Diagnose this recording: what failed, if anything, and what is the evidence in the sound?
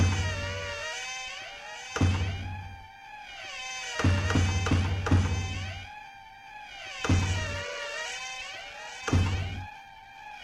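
Call bitrate drop in the codec stage: from 7.13 s to the end the sound turns coarser and loses its top end, consistent with a fall from 96 to 11 kbps, with no recovery.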